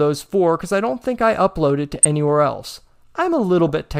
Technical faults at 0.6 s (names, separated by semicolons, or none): none